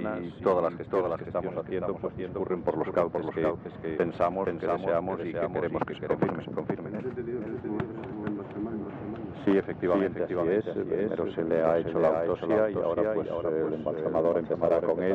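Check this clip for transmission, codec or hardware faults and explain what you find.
A doubled audio track runs through the whole clip: every sound returns as a single full-band copy about half a second later, some 5 dB quieter. The likely cause is the same signal reaching the mix twice, once directly and once through a slower capture path or a misaligned edit. Unlike acoustic echo or reverb, the repeat has no decaying tail, no further repeats and no room colouring. It is just a clean, slightly quieter second copy trailing the first.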